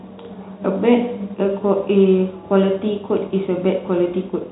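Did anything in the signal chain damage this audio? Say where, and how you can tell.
No, nothing in the chain damaged this speech; it is simply carried as G.711 telephone coding, so the sound stops at about 3.8 kHz, as a phone line should.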